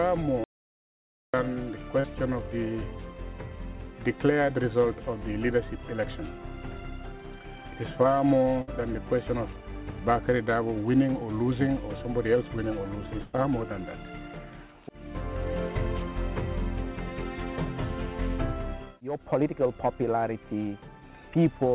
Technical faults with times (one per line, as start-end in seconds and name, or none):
0.44-1.34 audio dropout to silence
2.00-2.06 short concealed packet loss
8.62-8.69 burst of packet loss
13.21-13.35 burst of packet loss